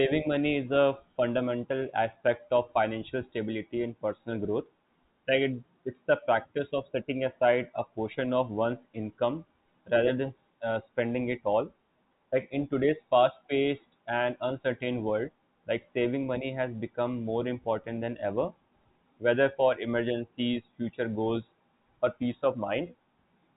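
Nothing goes wrong anywhere in this speech, which comes through as ordinary G.711 telephone coding with the usual narrow band that stops a little short of 4 kHz.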